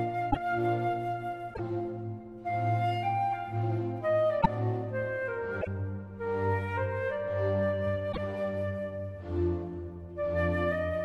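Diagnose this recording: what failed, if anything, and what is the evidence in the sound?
Broken MP3 bit reservoir at 0.30–0.37, 1.53–1.60, 4.40–4.46, 5.61–5.68 and 8.11–8.18 s, a codec-stage fault: each time the sound skips ahead and about 60–70 ms, two to three 26.1 ms frames, decodes wrongly. Frames were likely cut from the stream, so the next frames took their borrowed reservoir data from another frame's bytes.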